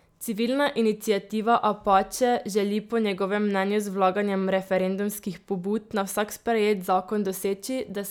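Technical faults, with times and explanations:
No technical faults are audible.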